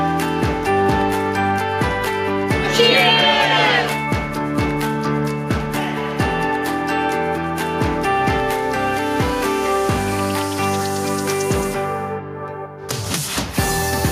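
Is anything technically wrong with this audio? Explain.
No, nothing technically wrong can be heard: the signal stays steady and intact for its whole duration.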